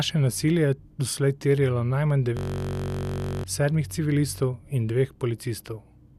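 From 2.37 to 3.44 s the speech gives way to a system hang loop: the host stalled while the audio hardware kept replaying one 21.33 ms block, which fits a 1024-sample buffer. The repetition produces a steady buzz near 46.9 Hz, and about a second of speech is lost.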